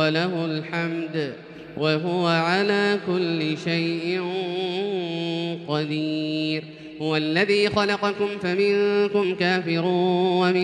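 From 5.85 s to the end at 10.63 s, the pace jumps to 1.41 times faster while pitch holds. This time-stretched section is likely from software dropping short pieces. It sounds rushed. Spectrogram harmonics keep their frequencies but crowd together in time, as do waveform envelopes.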